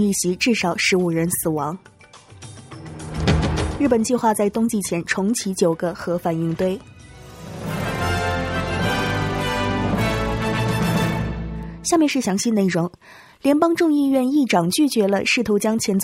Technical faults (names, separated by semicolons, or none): none